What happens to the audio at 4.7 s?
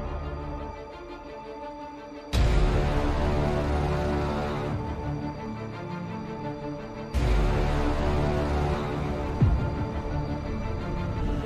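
Right at 4.72 s there's a quick blip, gone in a flash, and that's damaged data in the compressed stream. Some of the data there came through wrong, so the decoder couldn't make sense of the frame it was reading. It lost its footing and hunted for the next valid frame header before carrying on. That stumble is what you hear: a short glitch in place of the sound that should have been there.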